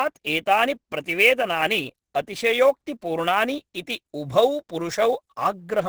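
From start to finish the speech sounds muffled and hoarse, with a grainy roughness and nothing above 12.1 kHz. That's likely Opus compression in its hybrid speech mode, running short of bits at something like 12 kbps and heavily damaging the detail.

Also running the whole way through is sample clock jitter. The converter's timing wanders by several microseconds, so steep, loud and bright parts pick up a hiss-like roughness roughly 25 dB down from the speech, fading away in the quiet gaps.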